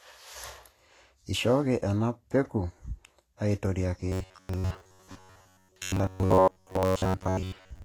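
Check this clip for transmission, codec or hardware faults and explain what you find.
Two faults are audible in this speech: coding damage across the whole clip, and a robotic buzz over its final stretch.

Vorbis compression is likely behind the damage heard from start to finish. Nothing is present above a lowered cut-off, and the treble just below it is coarse and grainy, with hiss in place of fine detail and softened consonant attacks. The encoder draws a smooth spectral outline and spends few bits on the detail riding on it, so that detail turns into noise of similar loudness. The damage is plainly audible, which points to a low bitrate somewhere around 36 kbps. A simple bandwidth limit would only dull the sound; here the remaining top end is actively roughened.

Robotic sound from repeated short buffers runs from 4.09 s to the end. The voice becomes a rigid metallic buzz at 93.8 Hz that still loosely tracks the speech. 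When new audio arrives too seldom, the last fragment is replayed to fill the gap while the real signal is skipped. That is the likely cause here, and the 93.8 Hz repetition fits a fragment of about 10.7 ms. Most of this stretch, roughly two thirds or more, is repeated material. A comb-filter or flanging effect colours the sound but keeps the speech intact, whereas this buzz repeats at one fixed rate and drops content.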